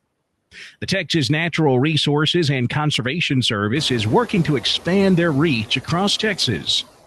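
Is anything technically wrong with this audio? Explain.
Yes. Noise suppressor artifacts are present throughout the speech. The suppressor pushes down whatever it treats as steady noise, by about 20 dB, frame by frame. The background drops away in pauses and comes back under the speech. This pumping is most obvious after the room noise rises, around 4 s.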